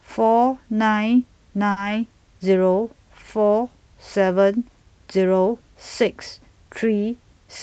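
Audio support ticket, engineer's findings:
Short stall from a late packet, 1.71–1.78 s. A packet arrived late and the jitter buffer underran. The receiver stretched the preceding sound by about 50 ms, then resumed at the same point. No audio lost. Playout delay stepped up by about 50 ms afterwards. Audible as a held sound with a slight buzz or dip. Path: WebRTC call codec. Top end stops near 8 kHz, which fits Opus at around 40 kbps.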